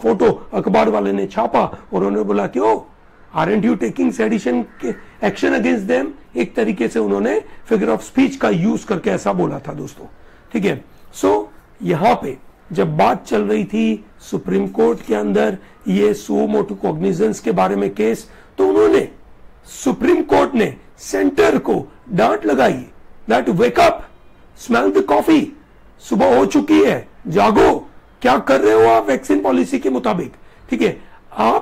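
From 0.00 to 9.83 s there is channel delay (comb filtering): one channel trails the other by roughly a single sample, and summing them to mono cancels content near 20 kHz. The result is a slightly dulled, softened top end rather than obvious hollowness.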